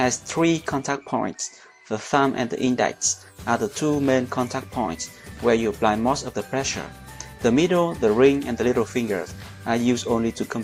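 Nothing in the audio stood out as a technical fault on listening.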